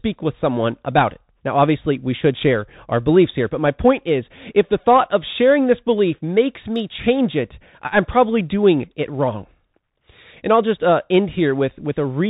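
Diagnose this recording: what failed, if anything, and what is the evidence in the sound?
Codec stage: the Bluetooth CVSD headset codec throughout; the spectrogram ends flat at 4 kHz, s sounds scratch, and granular hiss from the one-bit up-or-down steps lies under speech.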